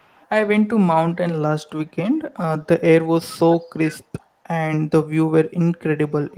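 From 0 to 0.23 s and again at 4.19 to 4.23 s, a faint echo leak returns the speech about 396 ms late, very quiet, around 40 dB and then 35 dB down. The likely cause is a far-end echo canceller missing loudspeaker pickup. The fixed, distinct delay separates it from room reverberation, which smears continuously.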